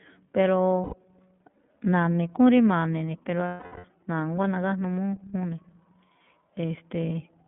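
Speech, carried through the iLBC codec for its whole length. Everything sits between roughly 150 Hz and 3.5 kHz, so a spectrogram shows an empty band above 3.5 kHz. The codec damage is plainly audible as a rough, slightly synthetic texture, consistent with the 13.33 kbps mode and its 30 ms frames. Lost iLBC frames cause two gaps, at 0.83–0.94 s and at 3.48–3.86 s, which fit about three and twelve missing frames. The decoder fills each gap by repeating the last pitch cycle mixed with noise, so it sounds like a held, buzzy vowel. On a spectrogram this appears as flat, repeating harmonic stripes. In the longer gap the waveform fades, and the voice returns right afterwards.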